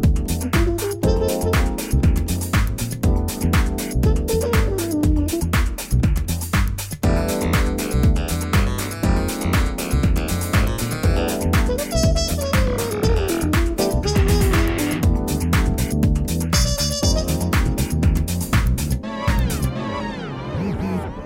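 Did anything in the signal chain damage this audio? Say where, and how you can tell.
Yes: a doubled audio track from 19.28 s to the end, with an equally loud copy about 0.7 s behind, likely a second, slower capture path. Unlike echo, it has no decay.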